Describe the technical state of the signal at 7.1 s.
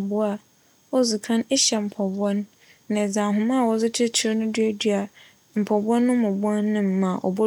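At 7.1 s the speech signal is intact, with no technical fault audible at that moment.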